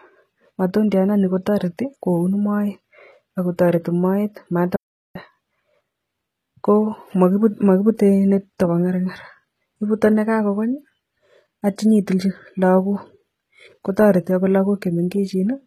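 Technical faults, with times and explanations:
Throughout, HE-AAC compression: the speech has no content above 14.9 kHz and plainly audible codec damage. The treble is likely rebuilt from copied lower bands, which fits a bitrate around 20 kbps.
4.76–5.15 s, audio dropout to silence: right after "ako toreti moet" the sound cuts to 0.39 s of silence with no room tone, likely because input was lost while recording continued.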